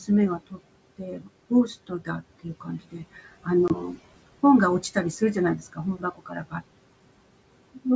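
Noise suppressor artifacts run through the whole recording. The suppressor pulls the room noise down by about 21 dB wherever it judges a band to hold only steady background, deciding frame by frame. The background, which sits about 17 dB under the speech, dips in the gaps and comes back up beneath each phrase.

Speech cut by the noise suppressor first occurs from 0.00 to 0.59 s. Here the suppressor mistakes parts of the speech for noise and lowers them along with the background, by up to about 15 dB, over roughly 150 ms in total. The same happens from 0.98 to 1.51 s, with drops up to about 14 dB over about 200 ms. In these passages, soft consonants and word endings sound swallowed or faint rather than cleanly articulated.

A longer stretch from 1.87 to 3.98 s loses about half a second of speech in scattered pieces, dipping by up to about 16 dB.

Inside that stretch, packet loss on an ADPCM call appears between 3.68 and 3.76 s. 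A 20 ms hole with hard edges, which points to a single lost packet, drops out to silence. The decoder's predictor and step size then no longer match the sender's, so the speech comes back slightly distorted with brief roughness before it settles.

The last speech cut by the noise suppressor, from 4.81 to 6.62 s, is the deepest. Drops reach about 21 dB across roughly 0.7 s of affected material.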